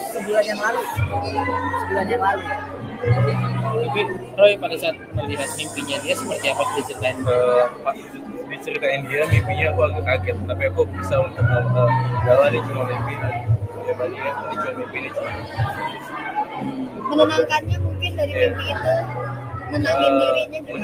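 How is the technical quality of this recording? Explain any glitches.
The recording has clear technical problems: its level keeps swelling and sinking, and held sounds and tails fade away unnaturally.

Noise suppressor applied to music or sounds: Across the whole clip, sustained material pumps and thins while sharp onsets mostly come through, with the level swinging by roughly 10 dB. A noise suppressor built for speech was left running. It mistakes steady tones, ambience and reverberant tails for background noise and keeps pulling them down, while transients pass because they don't look like noise.

Sound cut by the noise suppressor: Distinct dips, where a passage sinks below its surroundings or its decay is chopped short, occur at 2.58 to 3.03 s (about 8 dB), 4.12 to 5.78 s (about 9 dB), 7.71 to 8.68 s (about 9 dB), 13.65 to 14.21 s (about 7 dB), 14.78 to 17.07 s (about 9 dB), 19.37 to 19.7 s (about 5 dB) and 20.46 to 20.75 s (about 9 dB). 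Within each span, from a brief moment to about a second of the sound is affected. Here the suppressor judged the sound itself to be noise and attenuated it harder than the rest.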